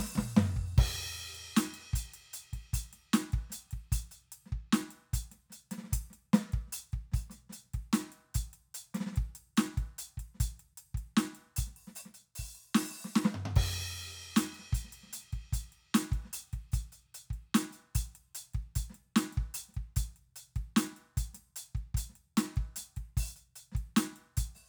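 Listening to the music here, nothing stood out as a technical problem at any point.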